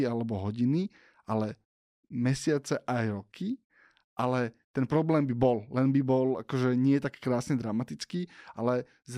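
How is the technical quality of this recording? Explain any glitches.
The technical quality of this recording is good, with no glitches to explain.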